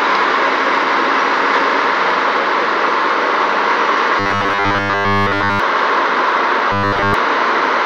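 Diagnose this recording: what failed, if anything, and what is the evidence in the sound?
Robotic sound from repeated short buffers at 4.20 to 5.60 s and 6.72 to 7.14 s: a rigid 100 Hz buzz, likely a driver or buffer stage looping 10 ms chunks.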